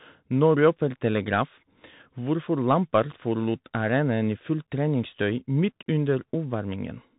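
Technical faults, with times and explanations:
Throughout, Bluetooth CVSD headset codec: the speech stops sharply at about 3.8 kHz, and the coding damage is plainly audible. Each sample is a single up-or-down bit with an adapting step size, which fits a 64 kbps CVSD link. Fast, loud high-frequency movement outruns the step and distorts, sibilants come out scratchy, and the constant step-hunting leaves a granular hiss beneath the voice.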